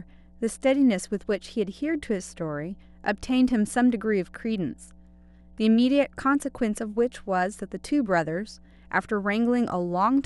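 A steady low 60 Hz tone sits under the speech from start to finish, roughly 30 dB down: mains hum from a ground loop or nearby transformer.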